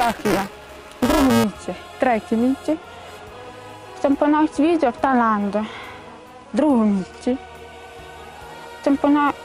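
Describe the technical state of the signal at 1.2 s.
At 1.2 s the signal is inside buffer tearing spanning 0.0 to 1.44 s. Each period, a small slice replays audio about 10 ms old, hard-joined both sides, making a 345 Hz rattle that fits a 128-sample buffer. Unlike dropouts, it leaves no silences.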